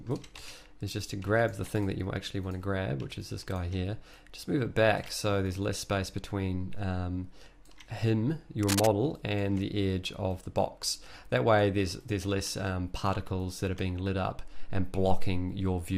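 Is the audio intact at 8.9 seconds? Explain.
No. Cable scratch noise runs from 8.63 to 8.90 s, ending right at that moment. Dense, uneven bursts of scratching sit only slightly below the sound itself. The likely cause is a worn cable or connector being moved, its contact resistance jumping rapidly.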